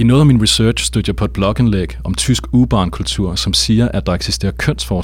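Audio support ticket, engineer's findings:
Mains hum present throughout the speech. Steady 60 Hz tone with low harmonics, roughly 15 dB below the signal. Probable ground loop or nearby transformer coupling the power line into the signal path. Check grounding and cable routing first.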